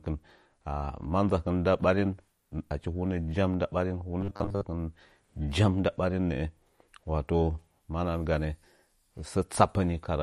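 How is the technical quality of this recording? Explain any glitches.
The recording has two clear problems: codec damage across the whole clip and a short robotic stretch.

Throughout, the speech carries MP3 compression artefacts, likely from a low bitrate around 48 kbps. Nothing survives above 15.1 kHz, and weak frequency lines flicker between frames, giving a watery swirl on sibilants. Unlike a plain low-pass filter, the damage shifts from moment to moment.

From 4.21 to 4.66 s, just after "hunə jaun nda ɓarin", a robotic sound from repeated short buffers takes over. Most of that stretch is short slices replayed, imposing a rigid 100 Hz buzz that fits a 10 ms buffer. Unlike a dropout, the sound never goes silent.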